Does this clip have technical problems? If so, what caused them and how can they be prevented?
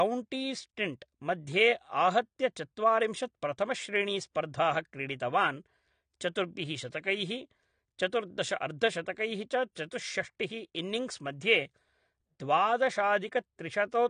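Yes. AAC compression runs through the whole clip: nothing reaches above 9.7 kHz, and the speech sounds dull and smeared with a fizzy edge on sibilants. This is likely a low-bitrate AAC-LC encode, which fits about 32 kbps, where the encoder drops the top band and coarsely quantises the rest. Encoding at a higher bitrate, or keeping an uncompressed master, prevents it.

Pre-echo is heard at 4.33 to 4.36 s, spreading 28 ms, and at 9.73 to 9.76 s, spreading 37 ms, right after "चतुर्दश अर्धशतकैः च". A short hiss arrives just ahead of a sharp onset because the codec spreads the attack's quantisation noise across the quieter start of the block. A higher bitrate or an encoder with better block switching prevents it.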